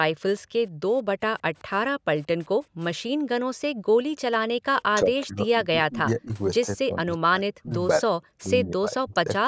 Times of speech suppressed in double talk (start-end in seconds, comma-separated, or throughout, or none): 4.84-6.30, 6.73-7.72, 8.05-9.45